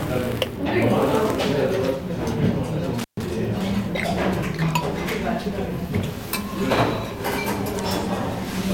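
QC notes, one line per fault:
2.99–3.23 s, intermittent contact: the sound drops out for about 133 ms with crackle at each edge and faint hiss in the gap, as a loose connection briefly opens.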